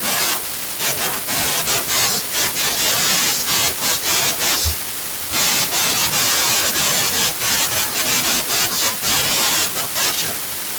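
No technical faults can be heard anywhere in the recording. Nothing in the speech points to a problem with how the audio was captured or delivered.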